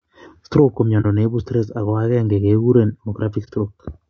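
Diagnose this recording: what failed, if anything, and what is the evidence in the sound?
The speech sounds rough and grainy throughout, with noise filling the gaps between harmonics. This points to the codec stage, likely low-delay AAC compression (AAC-ELD) at a bitrate near 32 kbps.

Brief dips occur at 1.01 to 1.06 s and 3.44 to 3.49 s. This is AAC frame loss with muting: each dip fits one zeroed 30 ms frame, faded out and in by the overlapping windows.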